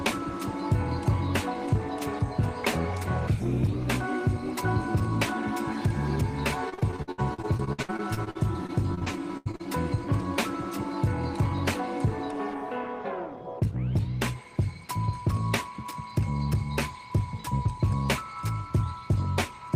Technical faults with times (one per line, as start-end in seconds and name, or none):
6.69-9.61 repeated packet loss (robotic sound)